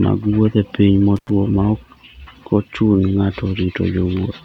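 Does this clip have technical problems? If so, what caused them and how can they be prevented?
Yes, there's one. Around 1.16 to 1.30 s the speech drops out for about 83 ms, with crackle as it cuts and again as it returns, and faint hiss in the gap. That's an intermittent contact: a loose plug or a worn cable briefly breaking the signal path, so the line goes open and then snaps back. To prevent it, seat connectors firmly, strain-relieve the cables, and swap out any lead that crackles when you wiggle it.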